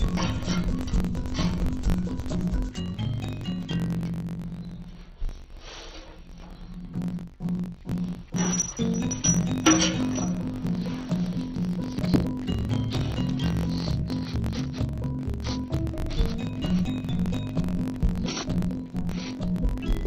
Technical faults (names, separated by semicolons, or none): interleaved audio read as planar